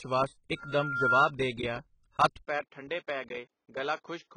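Low-bitrate audio saved at a high bitrate runs through the whole speech clip: artefacts and lost detail point to a very low-bitrate earlier encoding, likely AAC at around 16 kbit/s, later resaved as MP3 at 192 kbit/s, which enlarges the file but cannot restore what was discarded. A loudspeaker feedback squeal from 0.56 to 1.32 s, ending just before "ਦੇ ਗਿਆ ਹੱਥ", is a single 1.4 kHz tone that swells over about half a second to roughly 10 dB above the speech, as the microphone-to-loudspeaker loop gain at that frequency exceeds one. An input switched to a poorer device, the likely cause of the change, at 2.45 s, just after "ਦੇ ਗਿਆ ਹੱਥ", lasts to the end: with no gap, the sound turns duller with nothing above 7 kHz, drops about 5 dB in level, and gains a new background noise floor roughly 55 dB below the speech.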